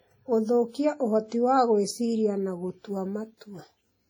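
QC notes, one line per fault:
Throughout: WMA compression. The speech rings and sounds washy, with a hiss that swells and fades with the signal. This likely comes from heavy transform coding, which fits a low bitrate around 32 kbps. Long blocks smear quantisation noise across tens of milliseconds and weak components drop out.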